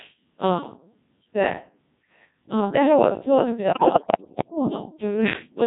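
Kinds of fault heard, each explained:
Codec 2 vocoder: The speech runs through a very low-rate digital-radio vocoder for its whole length, and the damage is heavy. At a rate that points to about 1.6 kbit/s, only pitch, voicing, level and a rough spectral envelope survive. The decoder rebuilds the voice from sine waves instead of keeping the original waveform. So the speech sounds robotic and buzzy throughout, with a synthetic quality.
Bit errors on digital voice radio: From 3.72 to 4.50 s, corrupted bits reach the vocoder at a high error rate, roughly one bit in seven. Each bit helps set the pitch, level, voicing or spectrum of a whole frame. Here 18 frames are hit. Here the synthetic voice lurches in pitch and loudness, shifts its tone colour, and breaks into warbles and robotic gibberish.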